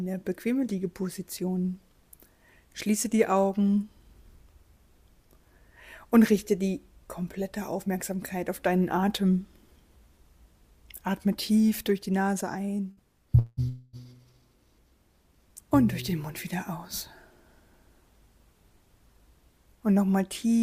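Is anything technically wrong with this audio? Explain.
Yes, there are three gaps in delivery close together. At 12.91 to 13.00 s there is a burst of packet loss. About 60 ms of audio never arrived, and the receiver stretched the last sound over the hole as a brief fading buzz or hiss before playback resumed further on.

Two longer breaks follow, at 13.39 to 13.60 s and 13.69 to 13.96 s, with about 180 ms and 240 ms missing. These are likely long network dropouts. Each time the receiver held and faded the last sound across nearly the whole gap, about 180 ms and 240 ms of continuation, so no true silence appears. They stand apart from the burst by their length: the held sound drags on longer before the audio jumps ahead.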